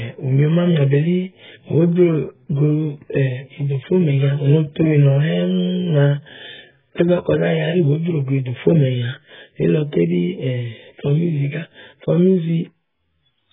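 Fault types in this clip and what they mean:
AAC compression: throughout, heavy damage cuts everything above 3.7 kHz and smears the speech dull, likely from coarse AAC-LC quantisation at a bitrate near 8 kbps.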